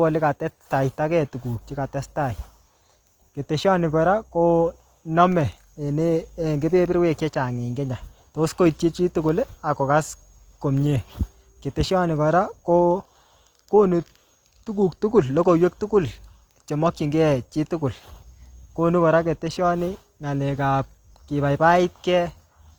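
Opus compression runs throughout the speech, from start to end. The audio sounds grainy and rough, with a noisy texture where clean tones should be, and the damage is plainly audible. The likely cause is Opus in its music (CELT) mode at a rate that fits around 24 kbps: starved bands are refilled with folded or noise content rather than left empty. The full bandwidth survives, reaching about 20.2 kHz, so this is harshness, not muffling.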